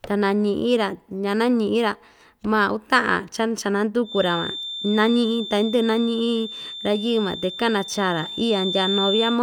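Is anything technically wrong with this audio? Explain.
Yes. From 4.01 s to the end, a feedback whistle sits about 10 dB below the speech: a thin, steady 3.6 kHz tone that swells and fades slowly in level. It is likely a loudspeaker-to-microphone loop held just at the edge of feedback, so unlike a runaway howl it never climbs.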